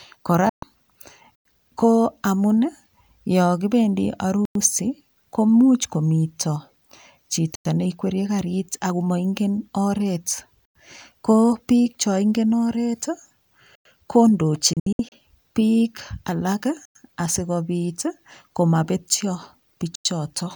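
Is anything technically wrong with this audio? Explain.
Yes, the speech has two kinds of interruption.

A digital broadcast dropout occurs at 0.49–0.64 s, and another at 14.73–15.13 s, where several brief holes are scattered across about 384 ms. The longest lasts 64 ms. The receiver muted on bad frames, fading out in about 3 ms, and speech transmitted during those holes is lost. Unlike the chunk gaps, these come at irregular times and skip speech.

A gap between chunks leaves a 100 ms silence at 1.35, 4.45, 7.55, 10.65, 13.75, 16.85 and 19.95 s. Audio delivered in 3 s chunks is joined with silence between pieces. Nothing is lost: speech pauses and resumes where it stopped, on a strict 3.1 s rhythm.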